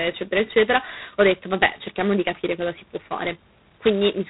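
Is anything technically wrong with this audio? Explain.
Yes. Throughout the speech, the system ran it through G.726 ADPCM at what sounds like its lowest rate, around 16 kbit/s. Each sample keeps only a coarse guess at its difference from a prediction, so a harsh, rasping hiss rides on the speech and swells with its level, and nothing above 3.8 kHz survives.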